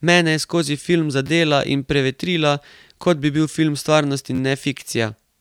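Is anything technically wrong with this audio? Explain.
Yes. Repeated buffers: at 1.27–1.29 s, between "je skozi film" and "in prevetrila kot"; at 3.02 s after "in prevetrila"; at 4.35–4.39 s. Late audio made the device replay its last 11.6 ms chunk, which fits a 512-sample buffer. Each replay is heard as a brief buzzing click.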